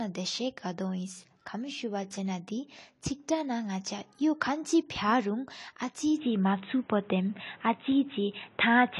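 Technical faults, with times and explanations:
Throughout, AAC compression: the speech was likely squeezed through a low-rate AAC-LC encoder, consistent with about 32 kbps, which quantises frequency lines coarsely. Nothing remains above 11.5 kHz, and the codec damage is plainly audible as dull, smeared detail with a warbling texture.
6.17 s to the end, input switched to a poorer device: the recording likely changed mid-stream to a narrower-band input with no gap at the switch. Everything above 3.9 kHz vanishes, the level shifts by roughly 5 dB, and new background noise appears well below the speech.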